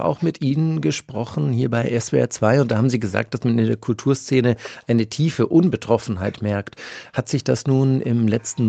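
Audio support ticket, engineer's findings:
No defects found in the speech signal; content stops at about 8 kHz, which fits the wideband limit of the call codec and microphone processing in this path and is expected behaviour.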